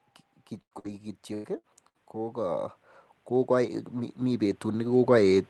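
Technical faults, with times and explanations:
0.61–0.74, 0.79–0.87, 1.34–1.47, 1.58–1.75 and 1.89–1.97 s, burst of packet loss: a run of packets dropped out, so the decoder held and faded the last sound for roughly 50 to 100 ms before jumping ahead. Between 40 and 100 ms of the speech is simply gone each time.
0.71–0.73, 0.84–0.86 and 1.44–1.46 s, lost packet rebuilt from error correction: single 20 ms frames patched from the low-bitrate backup copy in the next packet, so they come through rough and noisy instead of gapped.
2.12 s to the end, automatic gain rising: the gain control decided the input was too quiet and kept pushing the level up, so speech and background swell together for the rest of the clip.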